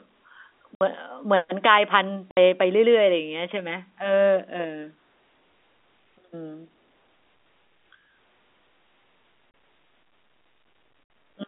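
At 0.75 s, 2.31 s, 9.51 s and 11.04 s, the speech drops out completely. This is packet loss filled with silence. Three gaps last 60 ms and the one at 9.51 s lasts 30 ms, which points to 30 ms packets, with one or two lost each time. The receiver had nothing to play, so it inserted dead silence. Each hole starts and ends abruptly. The narrow telephone band of the G.711 line stays audible around them.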